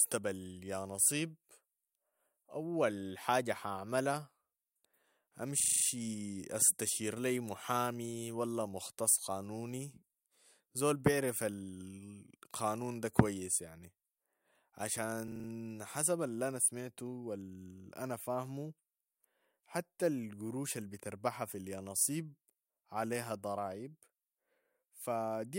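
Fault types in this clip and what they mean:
System hang loop: the playback side froze for a moment while the sound hardware kept replaying the same little stretch of its buffer. Here it's a 40 ms slice looping, so you get a rough buzz at 25 Hz rather than a stutter. It happens twice in this speech clip, from 5.6 to 5.84 s (six repeats) and from 15.28 to 15.48 s (five repeats), and each time the talker picks up right where they left off.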